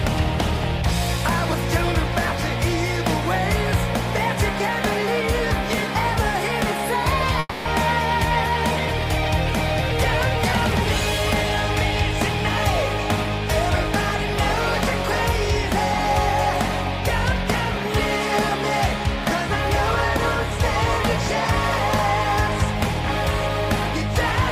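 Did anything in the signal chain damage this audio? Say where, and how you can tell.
Yes. At the network stage, a call audio freeze runs from 7.39 to 7.67 s. The last sound is stretched into a fading fill for about 260 ms, with roughly 10 ms of near-silence, and then the audio resumes exactly where it stopped. The likely cause is delayed packets draining the jitter buffer. Unlike a loss, nothing is missing.

A skip ahead between 13.23 and 13.26 s also comes from the network or jitter buffer. Playback jumps forward with only a tiny join, and about 70 ms of audio is gone. Unlike the freeze, there is no stretched fill. Material was discarded so that the audio could catch up with what was already waiting.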